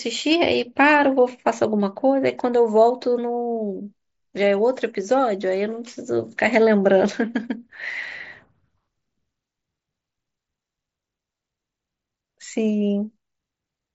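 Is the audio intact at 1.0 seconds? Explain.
Yes, the speech at 1.0 seconds is intact, with no dropout, glitch or other fault at that moment, only the band-limited sound of the Bluetooth mSBC headset codec.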